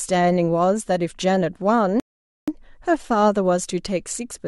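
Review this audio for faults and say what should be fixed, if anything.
A rebuffering stall at 2.00–2.48 s adds 478 ms of flat silence: the player's buffer emptied, and speech resumes exactly where it stopped. On a waveform it shows as a flat gap; on a spectrogram, a blank vertical band. Prevent it with a larger playback buffer or adaptive bitrate switching.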